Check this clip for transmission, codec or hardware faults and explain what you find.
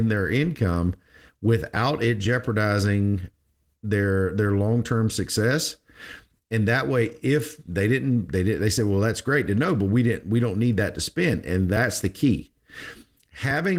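No faults are present: the speech bears the light coding texture of Opus voice compression in its hybrid mode, with a fullband response reaching about 20.2 kHz, which points to a rate around 20 kbps.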